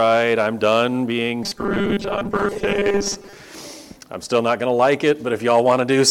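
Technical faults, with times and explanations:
1.44 to 3.34 s, robotic sound from repeated short buffers: the sound turns rigid and metallic, with a steady 200 Hz buzz imposed on it while its broad contour still moves underneath. The likely cause is new audio arriving too seldom, so playback fills the gaps by looping the last tiny slice. A 200 Hz buzz points to a slice of about 5 ms. Roughly half of the material becomes these repeats, and the real audio in those gaps is skipped.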